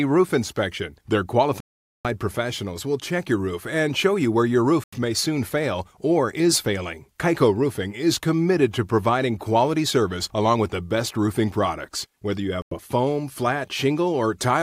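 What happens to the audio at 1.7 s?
A Bluetooth stall, 1.60 to 2.06 s: the speech drops to 0.45 s of silence, likely because delayed wireless packets emptied the playback buffer.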